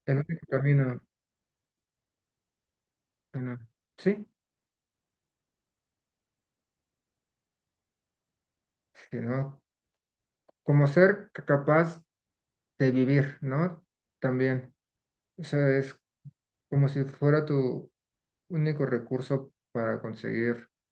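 At 3.37 to 3.39 s the speech does a skip ahead: roughly 0.7 s of audio is discarded and playback jumps straight to later material with no silence or filler. Unlike a dropout, nothing is concealed or muted; the two sides simply butt together, so content vanishes abruptly.

From 3.47 to 5.53 s a jitter buffer speed-up follows, as the receiver sheds the excess backlog by repeatedly cutting out tiny pitch-period slices, around a third of a second in all. Speech runs at 114% speed and sounds hurried, but unlike resampling the pitch stays unchanged, all heard through the Opus call path at 40 kbps with content above 12 kHz cut off.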